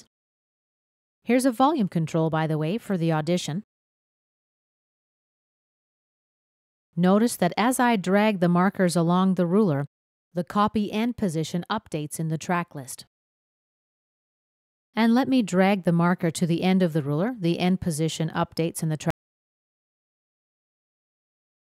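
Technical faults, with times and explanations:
19.10 s to the end, audio dropout to silence: the sound stops abruptly mid-flow and the last 2.6 s are silent, with no room tone, hiss or decay tail. The input was likely lost, through a disconnected device, a failed link or an accidental mute, while the recorder kept writing blank samples. A fade-out or noise gate would taper or leave a faint floor. A natural ending would trail off. This is a hard cut to silence.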